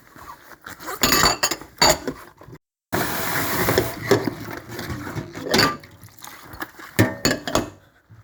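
No technical faults are audible.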